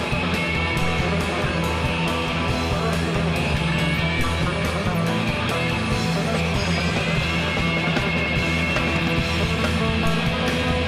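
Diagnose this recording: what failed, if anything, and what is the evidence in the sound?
What failed is a DC step, twice, at 4.20 s and again at 10.06 s. Each time the waveform's zero line jumps by about -20 dBFS (about -19 dBFS the second time), and you hear a dull low thump while the sound carries on untouched. The offset then bleeds away, behaving like a 2 Hz high-pass pulling it back over a few hundred milliseconds. That points at the converter recalibrating, or an offset-carrying analogue input being switched in.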